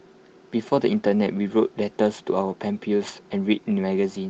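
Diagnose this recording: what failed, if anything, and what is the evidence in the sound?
A brief rough, noisier patch from 3.07 to 3.13 s with no gap: a lost packet rebuilt from error correction, the network loss concealed by Opus's lower-quality in-band copies, consistent with two lost packets.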